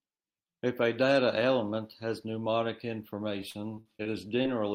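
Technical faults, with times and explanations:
3.41–4.07 s, repeated packet loss (robotic sound): Over these 0.65 s the speech keeps breaking up, with about half a dozen holes, the longest near 46 ms. Each gap is patched by stretching the last sound forward. The patches add up to about 145 ms, roughly a fifth of the stretch, and the next hole arrives before the speech settles. Unlike a single dropout, this gives a sustained choppy texture with pieces of speech missing.
4.43–4.46 s, short concealed packet loss: This is a single brief hole of about 20 ms. The receiver covers it by extending the preceding sound for about 15 ms, carrying its pitch through if it was voiced or filling with shaped noise if not, then blending back into the real signal. It is heard as one quick smear or wobble rather than a run of robotic chopping, because it happens once and the speech recovers at once.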